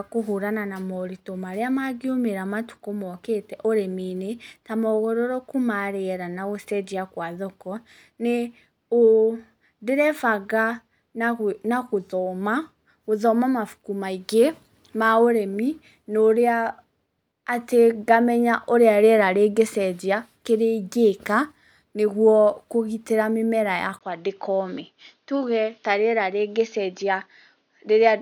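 At 23.99 s the speech goes dull and narrow after a 20 ms gap, and stays that way to the end. Nothing above 6.6 kHz remains. The level barely changes, and a faint new noise floor appears. The likely cause is the input switched to a poorer device.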